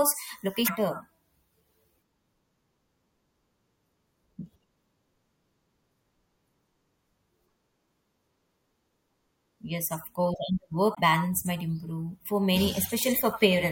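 Three short bursts of damaged data in the compressed stream interrupt the speech, at 0.64 to 0.70 s, 6.57 to 6.62 s, and 10.93 to 10.99 s, the last falling between "of course and" and "balance might". Each lasts roughly 45 to 55 ms. Corrupted bytes in the stream make the decoder misread those frames and lose sync until it finds a valid frame header again. Each sounds like a brief chirp, squawk, click or short hole.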